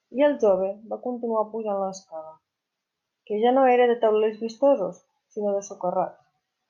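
Nothing in this speech recording stands out as a technical problem, so there's nothing to flag.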